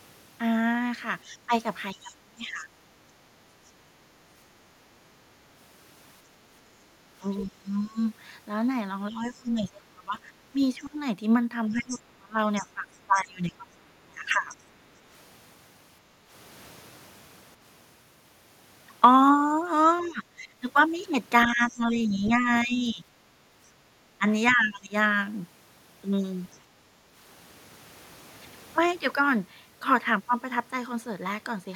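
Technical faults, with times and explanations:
1.25 to 2.68 s, 7.46 to 14.54 s, 20.01 to 24.94 s: speech suppressed in double talk. The talker dips by up to roughly 25 dB while the far side speaks. This is likely an echo canceller that could not separate the two talkers and attenuated both. On the waveform the envelope is notched.
1.34 to 2.65 s, 7.37 to 14.57 s, 19.99 to 26.57 s: other side's voice leaking through. A second voice sits about 20 to 25 dB below the talker, likely loudspeaker echo left in the microphone. It appears as faint extra harmonic traces on the spectrogram.
3.91 to 7.11 s, 16.12 to 16.3 s, 26.75 to 27.12 s: background gated by the echo canceller. The room tone briefly drops about 6 dB while the loudspeaker plays, which shows as short dips in the noise floor on the waveform and spectrogram.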